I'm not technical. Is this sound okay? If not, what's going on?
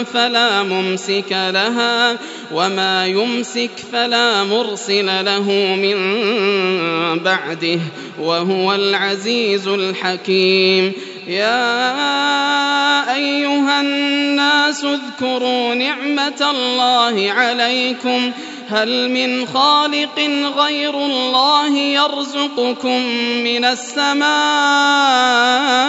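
Yes, no technical faults are audible anywhere in this recording.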